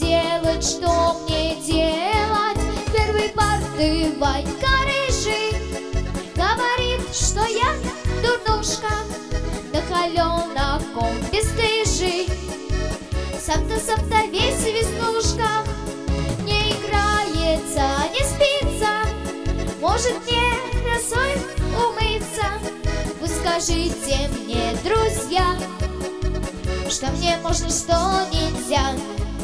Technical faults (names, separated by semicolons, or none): none